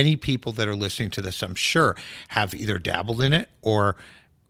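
No technical faults can be heard in this recording.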